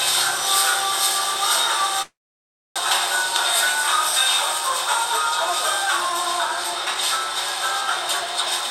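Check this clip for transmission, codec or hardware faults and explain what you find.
Two transmission faults stand out, both from a packet network path rather than the codec or hardware.

From 2.02 to 2.80 s there is what sounds like a long network dropout, likely caused by a stall in arriving packets. With nothing to decode, the receiver stretched the last sound into a fading buzz or hiss that quickly sinks to near-silence for about 0.63 s. The audio resumes about 0.6 s further on, so that stretch is simply gone, and the playout delay shifts by roughly 150 ms.

From 5.61 to 7.18 s a jitter buffer speed-up follows. Having built up more buffered audio than it targets, the receiver trimmed many short pitch-period-sized slices to catch up, roughly 70 ms in total. Playback runs at 104% speed with the pitch unchanged, just under the point where it would clearly sound hurried.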